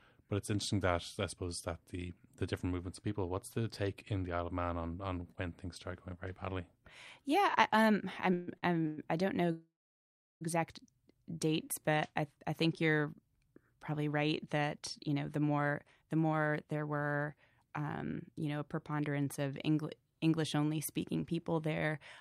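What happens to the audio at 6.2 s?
Nothing goes wrong at 6.2 s; the speech carries on intact through that moment, with no dropout, click, distortion or other fault.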